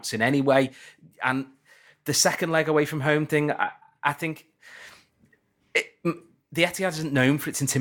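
A decoder fed a damaged compressed frame is behind the one fault here, a corrupt frame decoded from 6.17 to 6.21 s. Flipped bits left the decoder misreading gains and spectral codes across what sounds like a couple of consecutive frames, so it rebuilt energy at frequencies where the speech had none. For those 40 ms a brief chirpy blip cuts across the speech, faint, peaking at roughly -45 dBFS.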